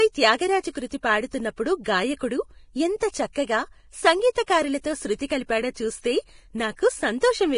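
Speech, likely squeezed through heavy low-bitrate Vorbis compression, with damage consistent with around 30 kbps. The encoder has cut everything above about 10.6 kHz and quantised the remaining treble so coarsely that fine detail turns hissy and grainy, roughening tones and smearing consonant attacks throughout.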